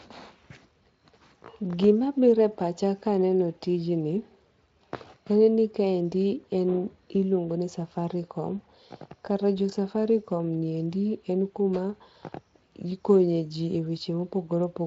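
No technical faults can be heard in this speech, which carries the light coloration of a Speex-coded path with the band stopping at about 7.6 kHz, as is normal for that codec.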